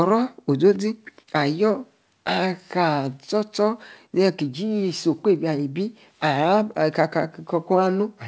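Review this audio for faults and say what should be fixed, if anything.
Nothing to fix: the speech shows only the band limit of a call path, with nothing above 8 kHz, which fits a G.722 wideband codec, and no faults are present.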